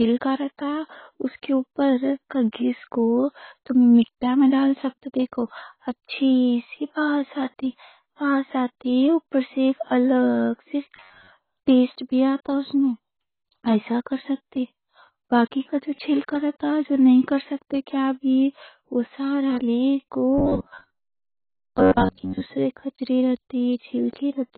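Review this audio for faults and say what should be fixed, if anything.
Everything above 4.5 kHz is missing throughout, likely from a low-bitrate first encoding later saved as high-bitrate MP3. Unlike ordinary low bitrate, the large file still sounds band-limited.

Robotic sound from repeated short buffers appears at 10.96–11.30 s (after "سے ایک الگ سے", before "پیسٹ بھی آتا اس") and 20.38–22.42 s (after "وہ سارا لے کو"). Most of the sound there is a rigid 93.8 Hz buzz, which fits a roughly 10.7 ms buffer being repeated. Unlike codec warble, the pitch stays fixed.

To prevent both, export from the original source at an adequate bitrate and make sure the audio buffers are filled in time during capture.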